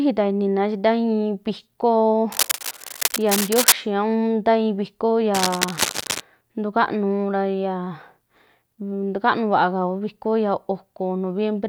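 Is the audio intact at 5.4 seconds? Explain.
No. At 5.4 seconds the speech is overlaid by a burst of harsh scratching and rustling that runs from 5.34 to 6.20 s, sitting only a little below the level of the speech itself. This is cable scratch noise, likely from a worn cable, connector or control being moved: its contact resistance fluctuates rapidly, injecting dense, irregular bursts of noise into the signal for as long as the disturbance lasts.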